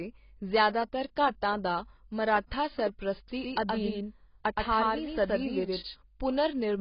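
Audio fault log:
Throughout: AAC compression, likely. Nothing is heard above 5.1 kHz, so the speech sounds dull. Codec damage is heavy. Sustained sounds and sibilants come out smeared and warbling. This fits a low bitrate near 16 kbps.
3.28 to 5.94 s: doubled audio track. A second full-band copy of the speech runs about a tenth of a second behind, at roughly the same level. It carries no decay or room colour. It starts and stops abruptly, likely from a slower second capture path or an edit holding two copies out of step.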